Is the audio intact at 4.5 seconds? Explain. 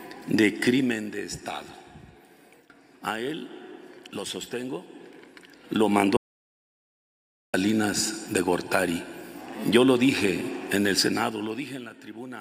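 Yes, the audio is intact at 4.5 seconds, with no dropout, distortion or other fault there.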